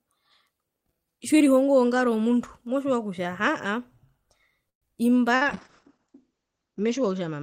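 A short speech recording shows three faults from a call path. At 4.69 to 4.85 s the sound stops advancing: about 122 ms is filled, first with a fading stretched buzz and then roughly 110 ms of near-silence, after which speech picks up exactly where it paused, now running 122 ms later. This call audio freeze is likely due to packets held up in transit until the jitter buffer ran dry. On a spectrogram it looks like smeared horizontal streaks decaying into a blank column. At 5.36 to 5.44 s a burst of packet loss drops about 60 ms of speech. The receiver extends the last sound for about 55 ms as a fading fill, then jumps ahead. In the waveform this appears as a short repetitive, shrinking segment followed by an abrupt resumption at a different point. From 5.45 s to the end, a call bitrate drop takes the codec from 32 to 8 kbps. The top of the audio band falls from 20 kHz to 8 kHz, and the lowest rate persists for about 1.2 s. 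The speech turns muffled and rough, and a spectrogram shows everything above 8 kHz cut off sharply.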